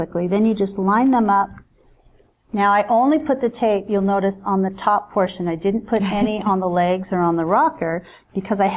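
No faults can be heard anywhere in the audio.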